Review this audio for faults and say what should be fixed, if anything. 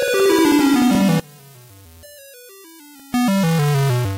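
From 1.20 to 3.14 s the sound drops by about 26 dB. This is likely one channel inverted. The shared content cancels when summed to mono.

Overlapping chunks show up from 1.97 to 2.00 s and from 3.00 to 3.02 s. About 23 ms repeats at each 1-second join, causing a brief stutter.

To fix it, check channel polarity before any mono fold-down, and trim the overlap so each chunk starts exactly where the previous one ended.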